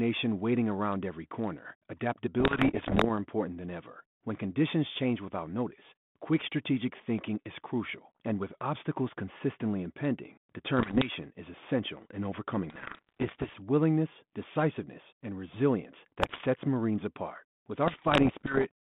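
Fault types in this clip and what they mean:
Bit errors on an ADPCM link: at 2.40–3.05, 10.78–11.11, 12.70–13.55, 16.20–16.47 and 17.86–18.66 s, the speech breaks into pops and rough, gritty bursts with brief jumps in level. Flipped bits in the 32 kbit/s G.726 stream knock the decoder's adaptive step size and prediction off track, so each error smears on for a few milliseconds. The first burst is the densest, at a few percent of bits, easing to about one percent by the last.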